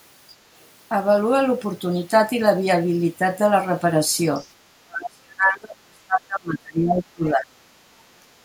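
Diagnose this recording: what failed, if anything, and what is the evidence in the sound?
Other side's voice leaking through, a call-processing fault: faint scraps of a second voice appear at 4.36 to 4.49 s and 7.26 to 7.3 s, roughly 30 dB below the talker. The likely cause is that the echo canceller left residual loudspeaker pickup in the microphone path.

Speech suppressed in double talk, also in call processing: from 4.82 to 7.62 s the talker's level drops while the far end is active, at worst by around 35 dB. The echo canceller likely could not separate near speech from echo and attenuated both.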